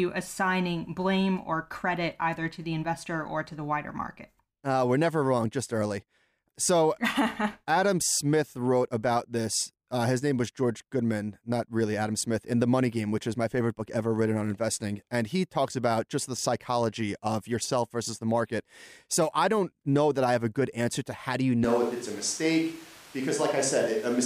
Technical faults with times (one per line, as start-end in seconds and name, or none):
21.64-24.25 switch to a distant microphone